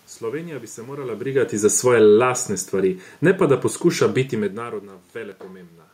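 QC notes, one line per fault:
1.59–3.48 s, automatic gain falling: after "bi se morala brigati", level sinks about 6 dB until "da poskuša biti". The background drops with the speech, so this isn't the talker moving.
2.18–2.61 s, automatic gain rising: the gain climbs about 3 dB over under half a second. Speech and room noise swell together, unlike a talker leaning closer.
5.32 s, dropped buffer (overrun): a jump in the sound, likely from samples overwritten before being read. Roughly 10 ms is skipped with no silent gap, unlike a dropout.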